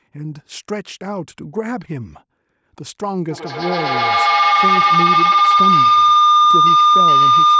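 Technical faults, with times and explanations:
3.31 to 7.6 s, feedback howl: two devices share a room, so loudspeaker output re-enters the microphone and gains level on every round trip. The repeats, about a tenth of a second apart, grow into a tone near 1 kHz that peaks about 10 dB above the speech.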